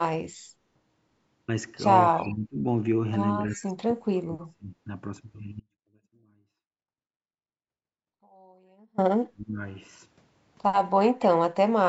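At 2.14 s the speech sinks by about 25 dB for half a second, until 2.65 s. This is speech suppressed in double talk. The same thing happens from 3.52 to 4.75 s (about 30 dB down, roughly a second in all), from 9.29 to 9.59 s (about 35 dB), and from 11.26 to 11.58 s (about 30 dB). Each time, the far side was most likely talking at once, and the echo canceller, unable to tell the near talker from loudspeaker echo, turned everything down.

Short scraps of a delayed copy ride along at 2.19 to 2.29 s, 3.53 to 3.57 s and 11.21 to 11.26 s, about 25 dB below the speech and lagging it by 269 ms. This is echo leak. The likely cause is that a loudspeaker-playing end did not fully cancel what its microphone heard, and that residue came back down the line.

From 5.6 to 8.98 s the speech cuts off abruptly and stays gone for 3.38 s. Only a faint sound about 30 dB below the signal remains, and then the speech snaps back in mid-flow. 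This is an audio dropout to a faint residue. Because the sound neither pauses nor fades, the wanted signal was likely lost while the path after the break stayed live. The call's microphone processing leaves nothing above 8 kHz across the clip.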